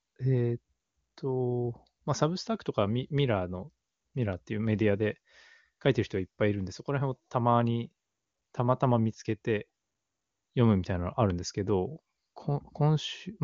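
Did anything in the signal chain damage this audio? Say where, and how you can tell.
No, nothing in the chain damaged this speech. It carries the band limit of AMR wideband (HD Voice) coding, with nothing above about 7.3 kHz, and its clarity points to one of the codec's higher rates, such as 23.85 kbit/s.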